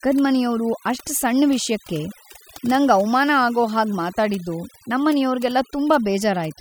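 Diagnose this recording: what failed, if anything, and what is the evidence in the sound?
Overdone noise removal, at the call-processing stage, runs through the whole speech clip. Between phrases the background drops to near silence, broken by twinkling specks. An over-aggressive suppressor is gating frequency bands near its noise estimate, and it takes quieter speech detail with them.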